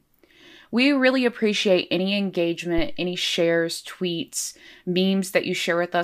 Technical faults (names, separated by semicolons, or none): phantom power thump